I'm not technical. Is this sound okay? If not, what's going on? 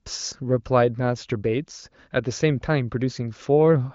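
Yes, this is speech carried over the AMR wideband (HD Voice) phone codec, which sets a normal ceiling with nothing above about 7 kHz and leaves at most faint traces of its processing, and no technical problems can be heard anywhere in it.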